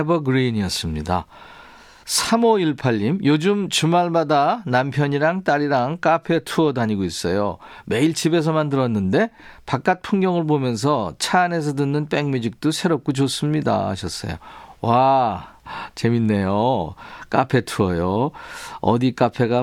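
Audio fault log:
No audible faults detected.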